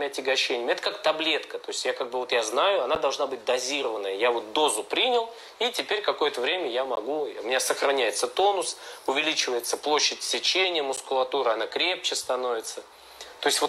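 At 2.95 s, 6.96 s and 10.97 s, the sound cuts out abruptly. These are gaps between stream segments. Each hole lasts 10 to 16 ms and has hard edges. They fall 4 s apart, matching the segment length. Adjacent segments' time stamps don't quite meet, so the player inserts silence there.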